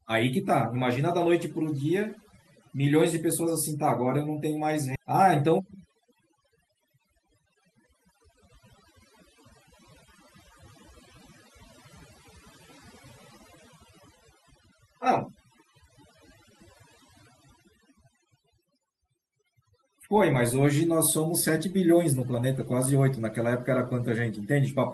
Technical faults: overdone noise removal; skip ahead; jitter buffer speed-up

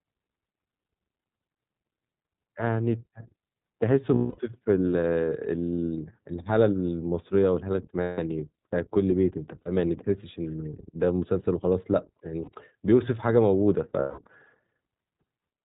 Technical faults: iLBC codec; lost iLBC frames

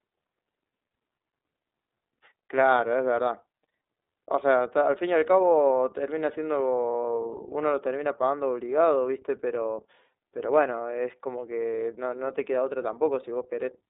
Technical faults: iLBC codec

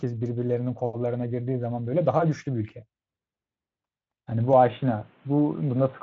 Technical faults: input switched to a poorer device

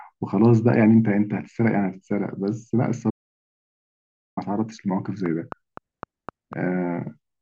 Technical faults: audio dropout to silence; train of clicks

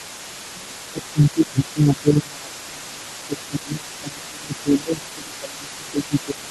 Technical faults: other side's voice leaking through; speech suppressed in double talk

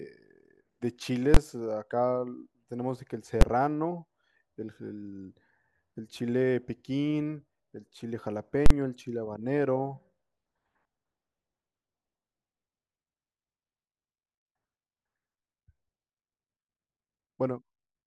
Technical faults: invalid numbers at full scale

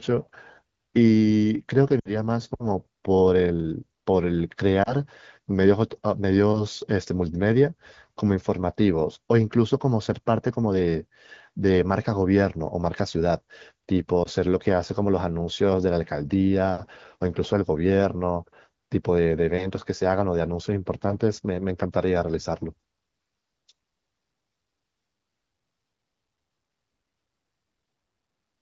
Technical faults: lost AMR speech frames

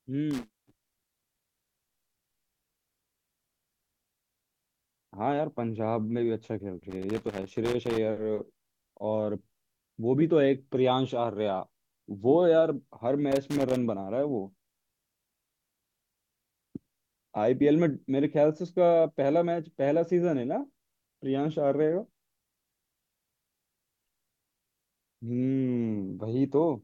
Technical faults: loose connector crackle

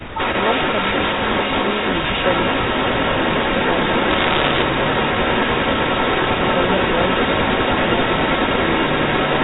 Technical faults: echo leak; bit errors on a digital phone line

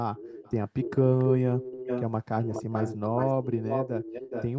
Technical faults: echo leak

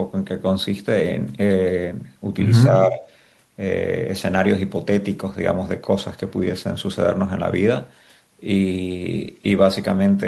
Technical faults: speech suppressed in double talk

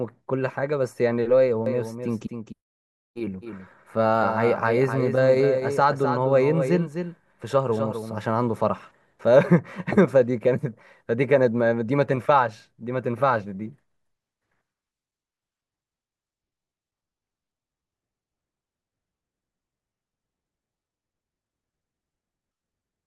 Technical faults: doubled audio track

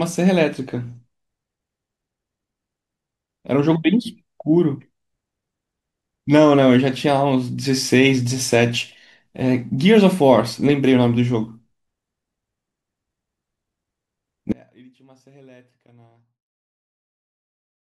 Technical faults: audio dropout to a faint residue

